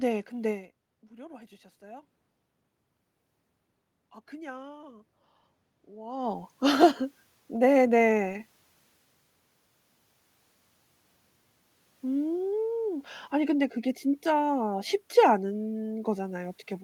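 From 4.29 to 6.52 s there is automatic gain rising. The input dropped by about 19 dB, and the gain climbed slowly by about 3 dB, so the room noise swells along with the speech. When the talker moves, around 6 s, the voice level changes.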